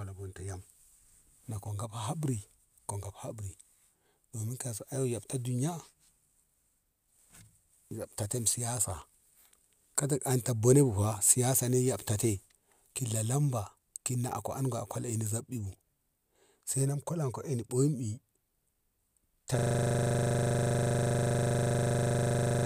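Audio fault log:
19.59 s to end, system hang loop: a single 40 ms piece of speech repeats exactly, about 77 times, until the clip stops. The host stalled while the hardware kept replaying its ring buffer, producing a steady buzz at a 25 Hz loop rate, which fits a 40 ms buffer.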